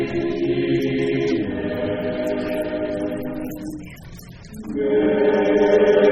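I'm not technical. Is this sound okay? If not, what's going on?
Yes, nothing wrong can be heard anywhere in this audio.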